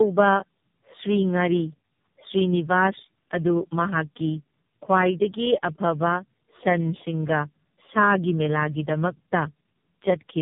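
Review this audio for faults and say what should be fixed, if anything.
Tandem speech coding runs throughout. The speech sounds rough, muffled and warbly, with nothing above 3.8 kHz. This points to about four speech codecs in series, ending in something like AMR-NB. Each one recodes the last one's damage. Prevent it by passing coded speech between links without decoding.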